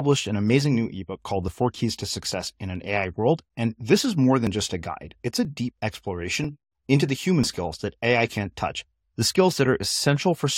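Speech in which overlap between stream segments, with 1-second segments, trims sound at each seam, causing brief clicks or skips at 4.47 s (after "and this is more"), 5.45–5.47 s, 6.44 s and 7.44 s (before "skills that").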